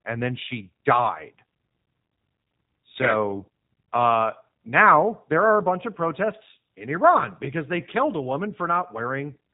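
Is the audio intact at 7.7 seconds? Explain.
No. At 7.7 s, as throughout the whole clip, the speech carries G.729 codec damage: it is rebuilt from a vocal tract filter, pitch predictor and sparse pulses, which fits an 8 kbit/s stream, so it sounds rough and synthetic. A spectrogram shows a hard empty ceiling above 3.8 kHz.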